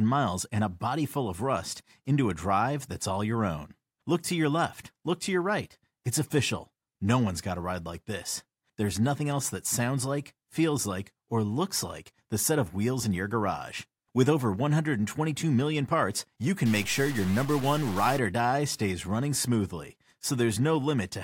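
Right after "million parts you", 16.66 to 18.19 s turns harsh and buzzy, likely a stuck bit, adding errors of about -35 dBFS until "or die stays running".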